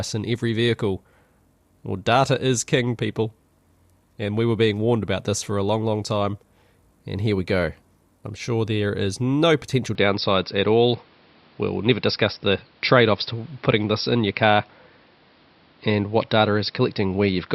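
An input switch to a poorer device sets in at 9.95 s, right after "there is no potential", and lasts to the end of this speech recording. From that point nothing is heard above 5.5 kHz, so the sound turns dull and boxy, and a faint new background noise sits well beneath the speech. There is no gap at the changeover and the level holds steady. The likely cause is the system moving to a narrower-band microphone mid-recording.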